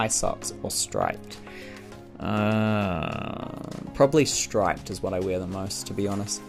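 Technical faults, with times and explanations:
2.98–5.45 s, sample clock jitter: a fine hiss and grainy roughness ride on the sound, swelling with loud, bright passages and dropping away as the level falls. The converter's clock wanders by something like a microsecond or two, so each sample lands slightly off time, and the error tracks how steeply the waveform is changing, sitting roughly 35 dB below the signal. Unlike steady background noise, it vanishes in quiet moments instead of staying at a fixed floor.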